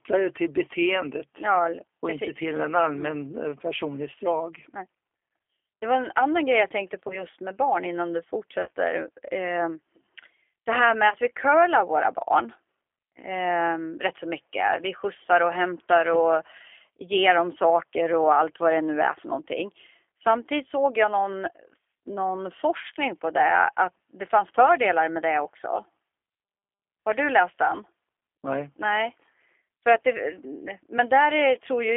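Swedish speech carried over a G.729 codec line throughout: the band sits between about 300 Hz and 3.4 kHz, and the 8 kbit/s encoding gives a plainly rough, synthetic edge. On a spectrogram everything above 4 kHz is empty. VoIP packet loss concealed by the speech codec appears three times. From 7.08 to 7.25 s, after "annan grej jag tänkte", a gap that fits a single 20 ms packet leaves a fading, stretched-out patch before "med barn innan du". A longer gap, about 40 ms, follows that phrase at 8.62 to 8.71 s. At 11.10 to 11.14 s, between "det här med" and "vi curlar våra barn", another 20 ms gap occurs. Each time the decoder extends its last pitch and filter at falling gain. On a spectrogram these show as smeared stretches, and the waveform dips in level before it recovers.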